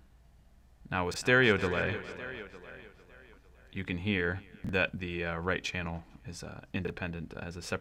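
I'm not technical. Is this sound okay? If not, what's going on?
No. Three times, at 1.12, 4.64 and 6.85 seconds, there are chunks out of order: a tiny slice of sound, about 23 ms, arrived one slot late and played after its neighbour. Each spot is a brief jumbled blip.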